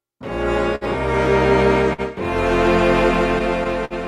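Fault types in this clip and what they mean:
Clock drift between sender and receiver: the sender's clock runs roughly 4% slow, so the buffer keeps draining, giving small uneven timing hiccups throughout the clip.
Short stall from a late packet: a late packet empties the jitter buffer; the last sound is held about 57 ms at 0.75 s and 51 ms at 1.93 s, nothing lost.
Repeated stalls (stutter): between 3.14 and 3.93 s the buffer runs dry four times, longest gap 54 ms, so the audio drags and stutters without losing content.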